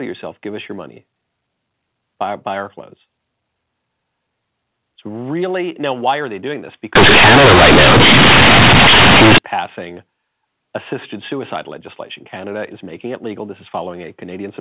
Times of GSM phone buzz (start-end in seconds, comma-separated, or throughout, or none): none